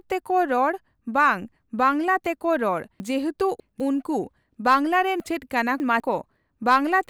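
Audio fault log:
3.0–3.8 s and 5.2–6.0 s: chunks out of order. In each span, one 200 ms chunk plays three chunks late, after the audio meant to follow it. Nothing goes missing. The sound jumbles briefly across three abrupt joins.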